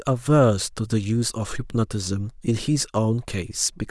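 Nothing goes wrong anywhere in the recording; there's no glitch, dropout or other technical fault to point to at any moment.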